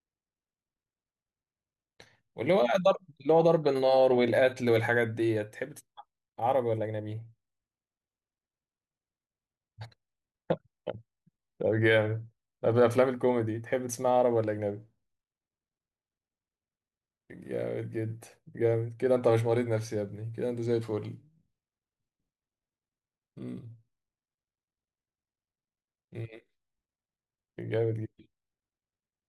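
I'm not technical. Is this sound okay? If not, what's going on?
Yes, this sound is okay; there's nothing going on with it that needs fixing.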